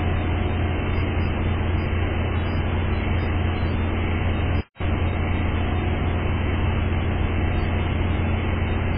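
From start to end the sound carries heavy MP3 compression damage, likely from encoding at a very low bitrate, with the damage pointing to something around 16 kbps. Short of bits, the encoder discards everything above 5 kHz and drops quieter frequency lines that flicker in and out between frames, giving a watery, swirling texture with smeared attacks. A spectrogram shows a flat ceiling at 5 kHz and patchy, blocky gaps below it.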